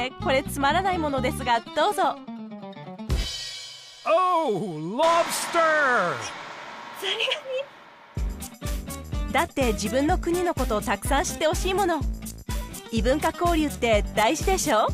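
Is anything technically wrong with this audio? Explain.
No, nothing technically wrong stood out on listening to this audio.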